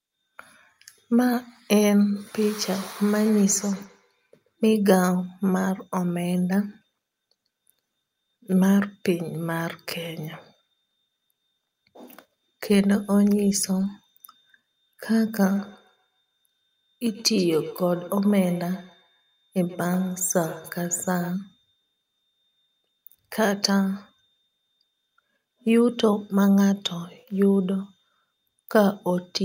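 From 2.42 to 4.53 s, and again from 15.41 to 21.38 s, the speech carries a feedback echo between two devices: a second device in the room replays the call, its microphone picks that up, and the local canceller cannot remove it. The speech returns roughly every 150 ms, thinner and ringing, peaking about 21 dB and then about 19 dB below the speech. A spectrogram shows faint, evenly spaced copies trailing each syllable; the waveform shows small repeated bumps at that spacing.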